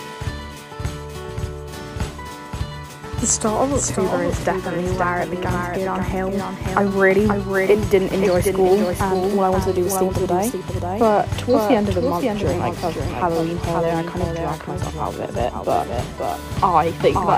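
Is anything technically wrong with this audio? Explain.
Yes. Throughout the clip there is a doubled audio track: the signal was likely captured twice, once through a slower path. A full-band copy trails about half a second behind, roughly 5 dB quieter, with no decay or room colour.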